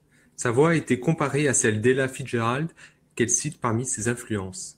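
No technical faults can be heard anywhere in the speech recording, which holds steady and continuous throughout.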